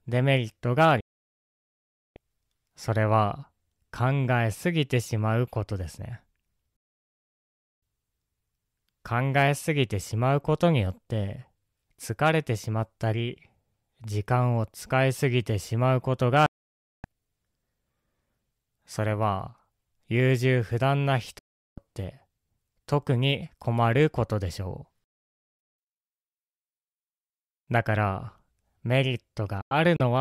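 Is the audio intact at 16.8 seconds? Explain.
No. At 16.8 seconds the speech is gone: it cuts out almost instantly at 16.46 s, with only a fade of a few milliseconds, and stays silent until 17.05 s, a hole of about 0.58 s. This is a digital broadcast dropout. The receiver stopped getting decodable frames, from a weak signal or failed checksums, and muted its output rather than play corrupt data. It resumed once valid frames returned, so the speech broadcast during that gap is lost.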